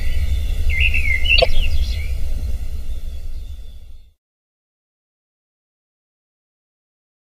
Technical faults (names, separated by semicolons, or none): damaged data in a compressed stream